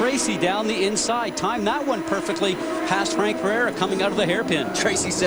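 A fixed-pitch USB whine at 1 kHz runs under the audio for the full duration, sitting roughly 25 dB below the signal. Its pitch matches the bus's 1 ms frame rate, so current drawn by the USB device each frame is leaking into the audio path through the power or ground wiring.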